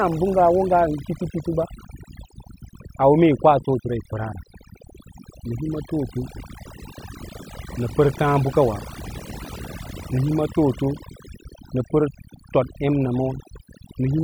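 A speech recording with overdone noise removal throughout: the background drops to near silence dotted with twinkling specks, because bands near the noise estimate were gated hard, taking quiet voice detail too. A spectrogram shows scattered isolated dots between patchy, hollowed-out speech harmonics.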